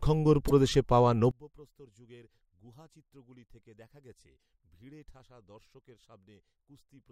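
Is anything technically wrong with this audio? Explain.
Yes, there are two faults. At 0.47 to 0.51 s, just before "প্রদেশে পাওয়া", there are repeated frames: one 24 ms block of compressed audio is played twice, adding 24 ms and producing a brief stutter. On a waveform, an identical 24 ms segment appears back to back.

From 1.31 s to the end, after "প্রদেশে পাওয়া", the speech drops by about 29 dB and becomes a faint copy, which is what you would expect from one channel inverted. With reversed polarity on one side, the centred content cancels when the channels are combined. A spectrogram shows the energy fading sharply.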